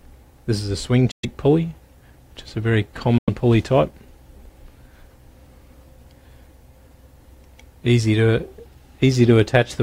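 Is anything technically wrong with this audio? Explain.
Yes. Two Bluetooth dropouts silence the audio, from 1.11 to 1.25 s and from 3.18 to 3.30 s, losing about 116 ms and 93 ms. The likely cause is wireless packets arriving too late and being discarded. Unlike an edit cut, the sound resumes further along, as though it had kept playing.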